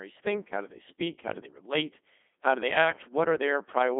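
From start to end the speech carries Codec 2 vocoder damage: resynthesised from pitch and envelope at about 2.4 kbit/s, buzzy and robotic, with nothing above 3.8 kHz.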